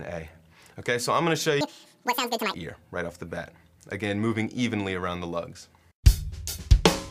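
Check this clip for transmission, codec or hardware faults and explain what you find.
There's one fault: a section at the wrong speed from 1.61 to 2.54 s. That stretch runs at twice the recorded speed, likely from being played against the wrong clock, so the sound jumps up by nearly an octave and feels rushed before dropping back down.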